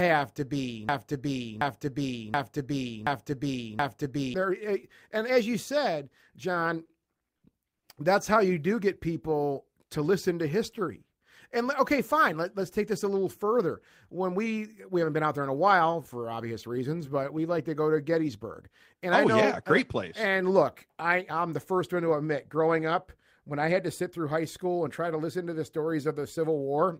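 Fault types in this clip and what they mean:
broken-record loop: After "to be", a 0.73 s piece repeats five times from 0.89 to 4.34 s, likely a stalled stream resending its last fragment, so that audio is lost.
repeated stalls (stutter): Between 6.85 and 7.84 s, five brief gaps of up to 50 ms are filled by stretching the last sound. Nothing is lost, but it drags.
jitter buffer speed-up: After "like to go to" and again before "high school and try", speech runs 5% faster at unchanged pitch, with roughly 50 ms trimmed each time.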